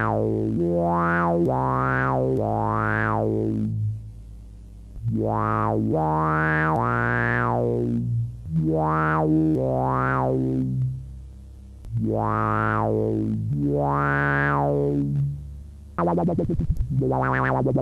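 No technical faults are audible anywhere in the recording.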